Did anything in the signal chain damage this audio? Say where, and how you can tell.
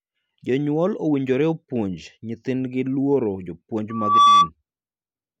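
Yes: a loudspeaker feedback squeal from 3.90 to 4.50 s, a steady 1.2 kHz tone that swells over roughly a third of a second until it sits about 10 dB above the speech. The damage happens at the acoustic and analogue stage, where the microphone picks up the loudspeaker it feeds. Around 1.2 kHz the loop gain exceeds one, so that single frequency keeps reinforcing itself and grows into a howl until the loop is broken.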